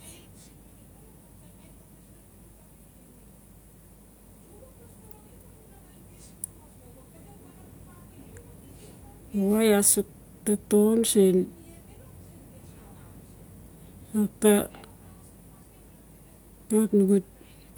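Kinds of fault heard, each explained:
No kinds of fault are heard in this speech clip.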